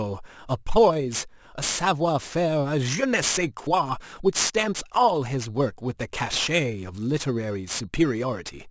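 It's a speech clip with aliasing running the whole way through. The sibilants come out gritty and a bit metallic, and the spectrum runs hard up against 8 kHz instead of rolling off. That points to a downsample to 16 kHz with no anti-alias filter first. Content above 8 kHz folded back down into the band as unrelated tones, sitting only around 15 dB under the speech.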